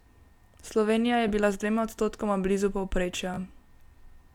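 At 1.28 s the speech catches briefly in a Bluetooth stutter. About 15 ms went missing, and the receiver replayed its last slice to fill the gap. A second stutter at 3.34 s is about twice as long and sounds like a short buzz. Afterwards the speech resumes further on, as if it never paused.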